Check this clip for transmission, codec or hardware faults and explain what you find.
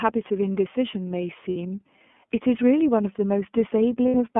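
Two kinds of fault can be heard: the whole recording has passed through the iLBC codec, and two brief dropouts show lost iLBC frames.

Throughout the speech the sound is thin and boxed-in, clear but slightly rough and synthetic, with plainly audible coding damage. Nothing reaches below about 200 Hz or above 3.4 kHz. This is the iLBC codec, a narrowband VoIP coder that models each 30 ms block on its own. The audible reduction of detail fits its 13.33 kbps mode.

At 1.49 to 1.57 s, and again at 4.08 to 4.15 s, the speech briefly turns into a held, faintly buzzy, breathy tone lasting about 60 ms. These are lost iLBC frames, and the length fits two consecutive 30 ms packets going missing. The decoder covers each gap by repeating the last pitch cycle blended with noise. Because every iLBC frame decodes independently, clean speech returns almost immediately after each gap.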